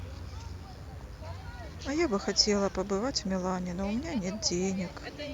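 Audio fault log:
Throughout: DECT cordless phone buzz. A nearby DECT handset or base bursts every 10 ms and the audio circuit rectifies it, leaving a thin 100 Hz buzz, well below the speech.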